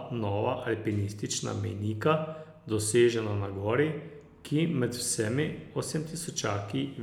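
Listening closely to the speech recording, nothing stood out as a technical problem at any point.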